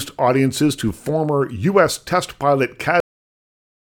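At 3.00 s, just after "test pilot", the speech stops dead in a cut-off end: the final buffers never reached the output, so the sound halts mid-flow and drops straight to digital silence for the last second. Unlike a fade-out or natural pause, there is no decay or room tail.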